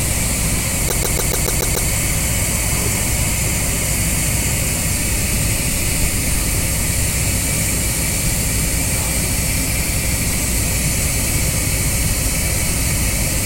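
From 0.88 to 1.89 s there is a stutter caused by repeated frames: a 144 ms block of compressed audio, consistent with a run of about six frames, plays seven extra times, adding 1.01 s.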